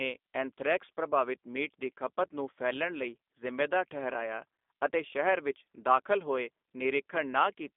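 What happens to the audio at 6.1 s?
As throughout the clip, a G.729 codec rebuilds the speech from a filter model and sparse pulses, so at 6.1 s it sounds rough, synthetic and capped near 3.6 kHz.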